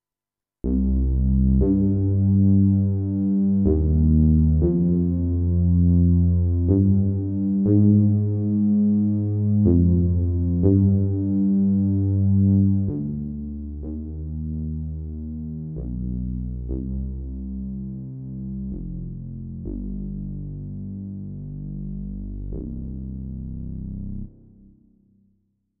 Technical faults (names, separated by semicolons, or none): zipper noise